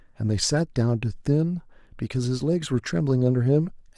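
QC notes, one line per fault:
No faults heard on this speech clip; nothing to flag.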